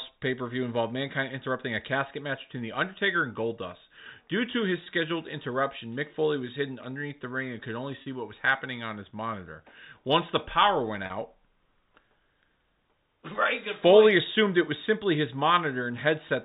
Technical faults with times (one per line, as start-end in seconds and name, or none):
4.84-4.86 packet loss with pitch repetition
8.02-8.06 packet loss with pitch repetition
11.06-11.10 packet loss with pitch repetition